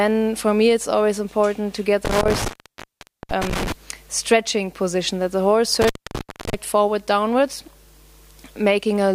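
The audio suffers from intermittent contact at 2.05–3.72 s and 5.81–6.54 s. A loose plug or cable conductor breaks the signal path, so the sound drops out with crackle at each edge, leaving faint hiss during openings of about 0.81 s and 0.64 s.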